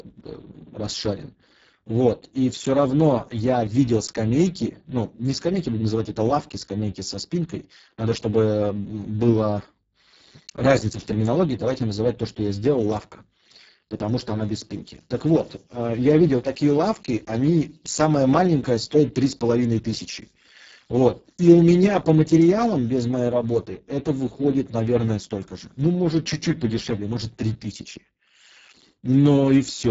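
From start to finish the speech has passed through the Speex codec at a very low bit budget, heavy enough to point to a rate near 6 kbps. With so few bits for the excitation signal, the CELP model rebuilds speech only coarsely: the voice sounds hoarse, grainy and noisy throughout.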